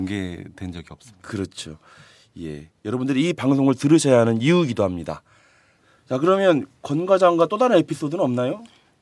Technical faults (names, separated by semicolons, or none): none